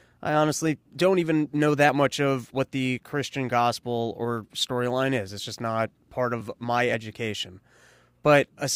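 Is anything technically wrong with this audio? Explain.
Yes. At about 6.41 s there is a jump in the sound, between "just not part" and "my education". The speech jumps forward with no gap of silence. A very short stretch, roughly 10 ms, seems to be missing. The likely cause is a dropped buffer (overrun). The recording software did not read a block of samples before the hardware overwrote it. That block was lost, and the audio on either side was joined directly, leaving a small skip.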